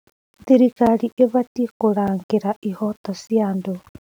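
Speech runs through the whole clip with a constant grainy roughness. The grit rises and falls with the voice, and it is worst in the quiet tails, where the sound sputters rather than fading smoothly. This error floor sits about 40 dB below the signal. That points to low bit depth without dither, likely around 8 bits with plain rounding. The rounding error follows the waveform, so it is heard as distortion, not steady hiss.

Three blocks of digital silence also occur, at 0.86 s, 2.08 s and 3.05 s. Each lasts about 5.3 ms. The audio drops straight to silence and comes back with no fade, so each one is heard as a sharp tick rather than a gap. The identical length fits a 256-sample buffer that was not filled in time.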